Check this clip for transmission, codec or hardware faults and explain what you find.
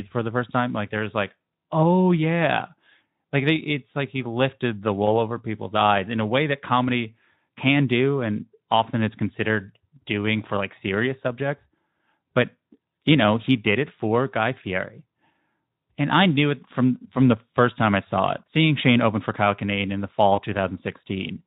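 One transmission fault stands out near the end: VoIP packet loss concealed by the speech codec, from 20.36 to 20.39 s. A gap of about 20 ms, consistent with a single lost frame, was filled by the Speex decoder, which repeated its last pitch and spectral shape at falling gain. It sounds like a brief stretched smear that fades. On a waveform the envelope sags smoothly rather than dropping to silence. On a spectrogram the preceding spectrum extends flat and dim before normal detail resumes.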